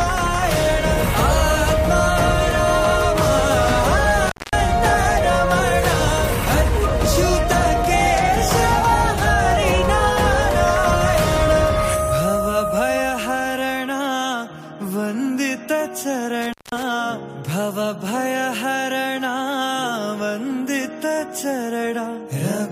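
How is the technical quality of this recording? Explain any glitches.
Two brief dropouts are the clear problem. An intermittent contact opens at 4.27 to 4.58 s and again at 16.42 to 16.83 s. A loose cable or plug breaks the signal path for about 210 ms and 190 ms. The audio cuts out, with crackle as the contact opens and recloses.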